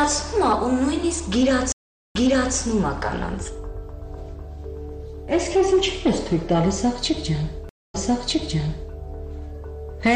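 Stream reconnects at 1.72 s and 7.69 s. The connection dropped and a fresh decoder restarted. Silences of 0.42 s and 0.25 s follow. The sound then replays from 0.42 s and 1.0 s earlier.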